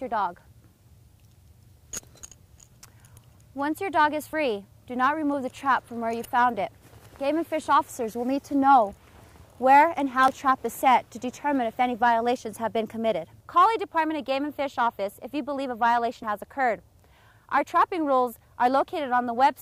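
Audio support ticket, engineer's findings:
Audio missing between chunks at 4.33 s, 10.28 s and 16.23 s: abrupt skips about 6 s apart, each dropping a short fragment, around 50 ms, spliced straight through with no silence. Likely a chunked recorder or processor losing samples at each chunk handover.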